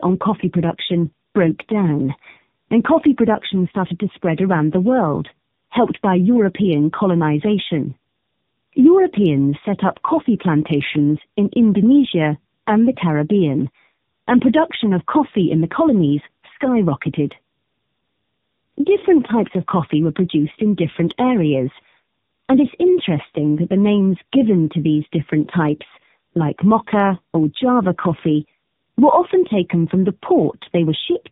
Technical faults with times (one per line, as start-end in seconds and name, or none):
0.00-31.32 tandem speech coding